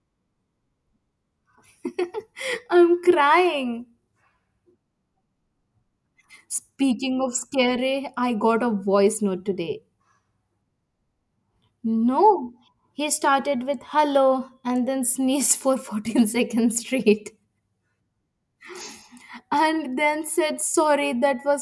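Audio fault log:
No fault found in this audio.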